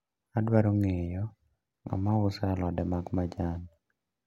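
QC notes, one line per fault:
No faults found in this speech recording.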